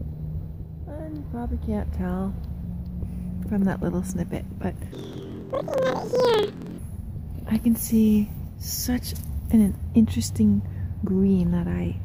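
From 4.92 s to 6.79 s the sound jumps up an octave and takes on a fast flutter, the signature of planar audio read as interleaved. Each block of all-left then all-right samples gets played as two double-speed halves, one per channel, so pitch rises 12 semitones while the overall pace holds. The flutter at about 21.5 Hz fits 46.44 ms blocks, likely 2048 samples each. A spectrogram shows harmonics shifted up an octave and striped vertically at that rate, and the waveform shows a matching block-by-block texture.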